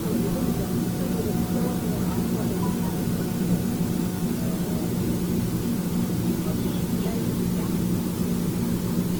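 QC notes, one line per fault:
Throughout: low bit depth with dither. A constant, even hiss sits under everything, roughly 15 dB below the sound itself, which fits a signal reduced to about 5 bits with dither added before rounding. Dither turns the coarse rounding error into steady white noise instead of distortion, so nothing crunches or buzzes, it just hisses. On a spectrogram this is a flat, uniform haze across all frequencies. On the waveform, the silences never reach a clean zero line.
Throughout: generation loss. The sound is swirly, smeared and hollow, and attacks are blurred, more than a single pass at this quality would explain. This points to Opus at around 48 kbit/s, likely decoded and re-encoded around seven times. Each pass quantises again on a shifted frame grid, so noise piles up. On a spectrogram there are smeared transients, with nothing above 20.1 kHz.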